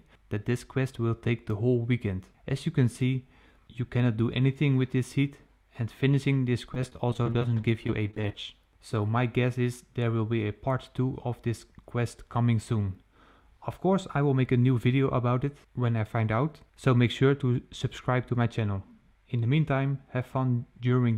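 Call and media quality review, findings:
Repeated packet loss (robotic sound), 6.74–8.35 s. Choppy stretch with a dense run of short holes, none longer than 25 ms. Probable component: network path or jitter buffer. Each lost or late packet is patched by extending the preceding sound, and about 280 ms is concealed this way, roughly 17% of the span. The fill-ins repeat closely enough to give the robotic texture.

Channel delay (comb filtering), 17.18 s to end of clip. Top end dulled, slight softening of the highest treble. Probable component: capture or mix stage summing stereo to mono. One channel lags by roughly a single sample, about 0.02 ms, so the shared content cancels with a first notch near 20 kHz. This acts as a gentle high-frequency roll-off rather than audible hollowness.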